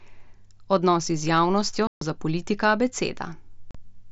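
Voice packets between headset and phone were dropped and never concealed, so this is unconcealed Bluetooth headset packet loss: after "z javnostjo" the speech cuts out from 1.87 to 2.02 s, and again from 3.71 to 3.75 s, each hole with abrupt edges over the light grain of the mSBC link.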